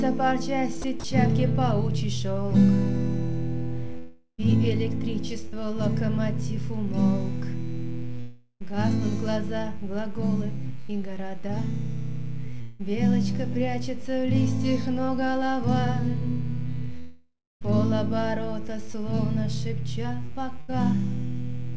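Running under the whole thing is a mains buzz at 60 Hz, sitting roughly 35 dB below the main signal. It's the raspy kind, not a smooth hum, because sharp switching spikes from something like a dimmer or rectifier, or a missing shield, get in twice per mains cycle and spray harmonics up into the kilohertz range. The top end itself stops at 8 kHz, which fits a G.722 call path.

Right near the start, from 0.82 to 1.04 s, the sound is chopped by the voice detector. About 60 ms gets swapped for comfort noise, so the audio goes choppy. The sender's voice detector was likely toggling between sending and not sending through that stretch.

Then come the long network dropouts, at 3.98 to 4.40 s, 8.20 to 8.62 s, 12.61 to 12.81 s and 16.99 to 17.63 s. Each time, the last sound is stretched into a fading buzz or hiss, and the audio picks up later with the missing piece just gone. The first two each lose about 400 ms and end in roughly 70 ms of silence. 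The one at 12.61 s loses 180 ms and is covered right through with no silence. The last is the worst, with about 620 ms missing and some 280 ms of dead air before things resume.

In between there are two short concealed packet losses. At 5.48 to 5.54 s about 40 ms never reached the decoder in time, and at 10.86 to 10.93 s about 20 ms went missing, with roughly 14 ms of material dropped outright. The receiver bridges each hole by carrying on the previous sound and then blending back into the real audio, so you hear a quick smear or wobble. A short sound caught in the hole can simply disappear.

Finally, between 18.93 and 20.72 s there are scattered short gaps, about three of them adding up to around 100 ms of lost audio, the longest about 70 ms. Each one is patched the same way, by continuing the last sound. In that stretch they come across as brief ticks and hiccups.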